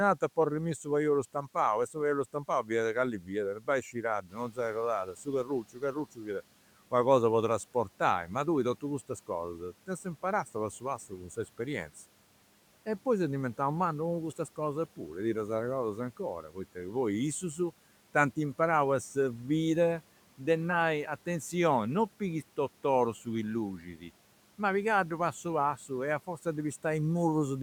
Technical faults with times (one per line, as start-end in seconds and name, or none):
2.33-2.70 speech cut by the noise suppressor
3.20-4.58 speech cut by the noise suppressor
4.28-5.13 noise suppressor catching up
5.05-6.27 speech cut by the noise suppressor
23.80-24.04 speech cut by the noise suppressor